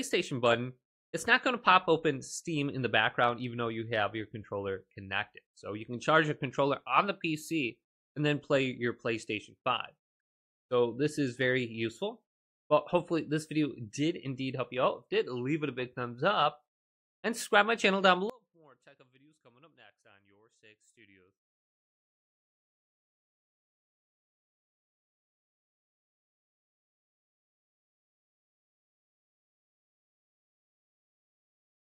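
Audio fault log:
18.30 s to end, one channel inverted: level drops about 29 dB to a faint residue, likely from polarity-flipped cancellation in mono; a dropout would leave silence.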